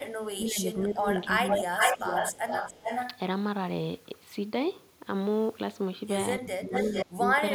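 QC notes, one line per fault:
0.37–1.06 s, 1.28–1.52 s, 6.39–7.38 s: speech suppressed in double talk. The speech dips by about 15, 10 and 20 dB respectively, losing its top end or dropping out in pieces, for roughly half a second, a fifth of a second and 0.7 s in total. The likely cause is an echo canceller that could not tell the local talker from loudspeaker echo during overlap and attenuated both. On a spectrogram, high-frequency energy vanishes in patches; the waveform envelope caves in.
1.50–3.19 s, 6.74–7.05 s: echo leak. A delayed copy of one voice returns 416 ms after the original, about as loud as the speech in the first stretch and around 5 dB below it in the second. This is likely loudspeaker pickup that the far-side echo canceller left unremoved and sent back. A spectrogram shows the same harmonic contours repeated 0.42 s later, overlapping the live speech; the waveform shows doubled syllable bursts at that spacing.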